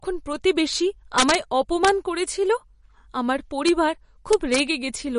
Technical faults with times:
0.00-5.18 MP3 compression
1.18-1.35 integer overflow
1.85-1.89 integer overflow
3.68 integer overflow
4.33-4.60 integer overflow

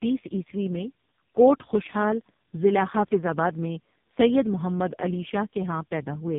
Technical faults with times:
0.00-6.38 tandem speech coding

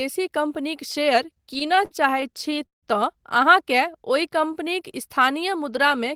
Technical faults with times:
1.23-2.85 repeated stalls (stutter)
3.99-4.63 jitter buffer slow-down

